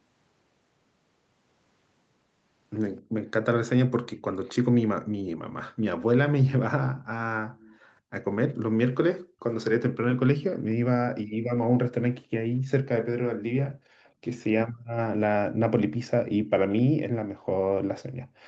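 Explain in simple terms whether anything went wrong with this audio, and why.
Two problems can be heard, both from the echo canceller of a speakerphone call.

Background gated by the echo canceller: at 3.02 s the room sound drops out sharply for about 0.15 s, then returns. From 8.01 s to the end, it keeps dipping the same deep way. The canceller hears the loudspeaker playing and turns the microphone down hard to stop it feeding back, so the background vanishes and comes back each time it lets go.

Echo leak: from 4.44 to 7.98 s and again from 12.55 to 16.82 s, a faint second copy of the speech trails the original by about a quarter of a second (258 ms). The likely cause is that the far side's echo canceller failed to remove all of its own loudspeaker sound from its microphone, so that leftover was sent back down the line and heard as a quiet delayed repeat.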